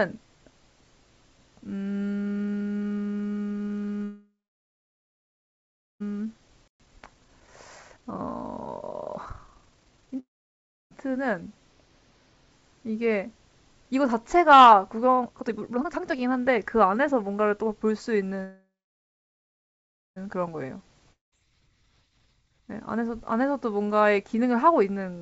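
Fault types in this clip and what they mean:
call audio freeze: The speech stops and the last sound trails on as a fading buzz or hiss that settles into near-silence, at 4.04 to 6.02 s, 10.19 to 10.93 s and 18.44 to 20.18 s, the longest holding about 1.7 s of quiet. Speech then resumes exactly where it broke off, with nothing skipped. The likely cause is delayed packets draining the receiver's jitter buffer, so the receiver filled the wait itself and added delay rather than losing audio.
jitter buffer speed-up: The speech sounds rushed but keeps its normal pitch. From 6.18 to 10.19 s it runs at 140% speed, removing about a second and a half. From 15.07 to 23.09 s it runs at a milder 113%, cutting about a second. The backed-up buffer held more audio than its target, so the receiver kept snipping out short pitch-period slices to pull the delay back down.
playback stall: A brief hole of silence, 120 ms long, interrupts the speech at 6.68 to 6.80 s, inside the first sped-up stretch. 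It is a clean cut in mid-flow rather than a fading tail, and the sound picks up again right after. The likely cause is the player running short of data or its output thread being blocked for that moment, leaving the output empty until it recovered.
time-compressed catch-up: Right after the stall, from 6.80 to 7.60 s, the speech is hurried at 1.15 times normal speed, with no pitch change. The player is working off the backlog that built up during the silent gap. It removes small pieces of audio and cross-fades across the joins, which gives the faster pace.
hard clipping: A crackle rides on the peaks of the speech from 14.51 to 14.72 s. The signal there is driven about 5 dB past what a stage in the chain could pass, so its peaks are sliced flat. Those squared-off tops create high harmonics that were never in the original sound, which is what turns the peaks rough. Within the call's 7 kHz bandwidth, that extra grit is added to the speech.
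long network dropout: At 21.12 to 21.34 s the sound breaks into a short fading buzz that dies to silence. When speech returns, it has jumped ahead, and roughly nine tenths of a second of material is gone for good. The likely cause is a stretch where no packets arrived at all. The receiver covered only about 0.2 s, then skipped forward past the lost part, cutting the accumulated delay by roughly 0.7 s.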